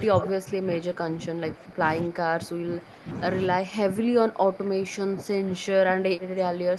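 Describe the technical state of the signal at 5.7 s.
At 5.7 s the echo canceller has most likely misjudged a stretch of double talk, treating the near talker's speech as loudspeaker echo and pulling it down along with the echo. This is speech suppressed in double talk, running from 3.5 s to the end of the clip. The speech sounds ducked and thinned, sinking by as much as about 15 dB at its deepest, and it stays audibly held down through the Opus call path rather than recovering to its earlier level.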